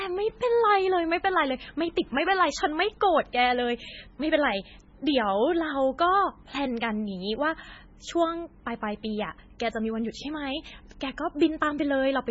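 MP3 compression damage runs throughout the speech, likely from a very low bitrate consistent with about 16 kbps. The encoder cut everything above 7.6 kHz and let weak frequency lines flicker between frames, leaving heavy, watery swirling, metallic chirps on s sounds and smeared attacks.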